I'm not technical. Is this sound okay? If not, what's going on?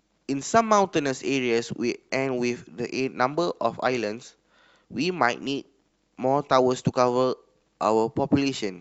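Yes, this speech recording sounds fine. Nothing in it points to a technical problem.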